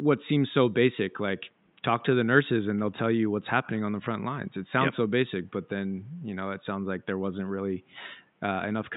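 Nothing stood out on listening to this speech; the faint room noise, about 41 dB below the voice, belongs to the recording space.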